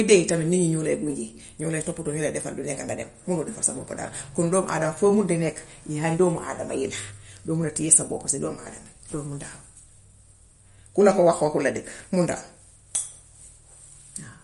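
Throughout the speech, nothing sounds above 11.2 kHz, and the sound is watery and swirly. This is likely MP3 compression at a low bitrate, around 48 kbps.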